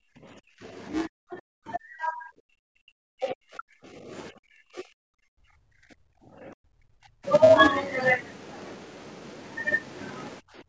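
Throughout the recording a steady buzz at 375 Hz sits under the speech, rising and falling with its level. This is a filter restarted on every block. Because the filter loses its state at each block boundary, every block begins from silence and produces a small transient. The repetition rate fits a 128-sample block, and the resulting train of ticks fuses into a pitched buzz that is loudest where the speech is loudest.

Layered on that, the speech is pushed down in four stretches: 0 to 0.64 s, 1.07 to 4.11 s, 4.3 to 7.25 s, and 10.4 s to the end at about 10.7 s. This is likely speech suppressed in double talk. The echo canceller cannot separate the near talker from the loudspeaker echo, so it attenuates both. The talker dips deeply, by about 30 to 40 dB at worst, within the band-limited sound (nothing above 8 kHz).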